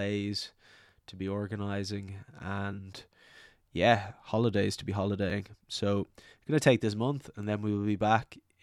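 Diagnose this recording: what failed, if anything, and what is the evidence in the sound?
Block of digital silence at 5.30 s, after "holidays to be": a 2.8 ms drop to zeros that ticks, pointing to a driver buffer that wasn't filled in time.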